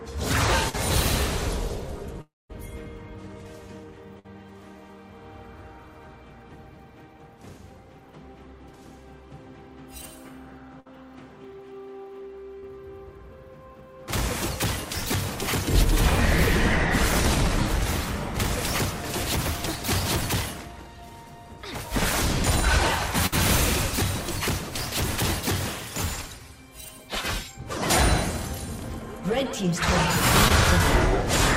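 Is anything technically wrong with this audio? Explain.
Yes. The audio has gaps from lost network packets.

Short concealed packet loss occurs at 0.69–0.75 s, 12.59–12.64 s and 30.48–30.52 s. Late packets were patched by extending the previous sound, leaving a brief smear or wobble.

Bursts of packet loss hit at 4.19–4.26 s, 10.80–10.87 s and 23.26–23.34 s. About 60 ms went missing each time. The last sound was held and faded, giving a short buzz or hiss.

From 2.21 to 2.51 s there is a held, fading sound, then about 200 ms of silence. This is likely a long network dropout, losing about 280 ms.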